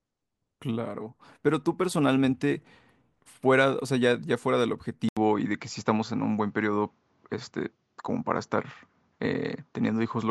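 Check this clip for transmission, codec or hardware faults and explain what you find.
One fault: at 5.09 s there's an 80 ms gap, then the speech comes back duller until the end, with nothing above 7.6 kHz, similar loudness and a faint new noise floor. That's likely an input switched to a poorer device with a narrower band.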